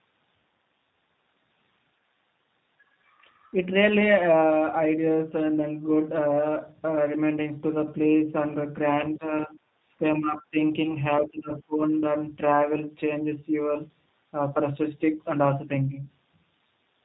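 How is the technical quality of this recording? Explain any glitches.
The recording is compromised by three kinds of fault: coding damage throughout, two brief dropouts, and a cluster of level dips around 9 to 12 s.

G.729 codec, throughout: the speech has been squeezed through an 8 kbit/s coder that rebuilds each 10 ms frame from a vocal tract filter, a pitch predictor and a handful of pulses. Everything above 4 kHz is gone, so the voice sounds narrow and muffled, and the damage is plainly audible as a rough, slightly synthetic grain on every syllable.

VoIP packet loss concealed by the speech codec, at 0.39 to 0.42 s and 10.83 to 10.94 s: each time about 20 ms of audio went missing, which fits two lost 10 ms frames. The decoder filled the gap by repeating its last pitch and filter settings at falling gain, so a short buzzy smear replaces the real sound. Because each frame builds on the previous one, the second event stays degraded for about 0.1 s before recovering.

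Speech suppressed in double talk, at 9.18 to 9.54 s, 9.99 to 10.03 s, 10.19 to 10.57 s and 11.21 to 11.94 s: the voice ducks in pieces, by about 10 dB at first and then deeper, reaching about 20 dB in the final stretch. This is likely an echo canceller that could not tell the talker from loudspeaker echo while both sides spoke, and so turned the whole signal down until it could.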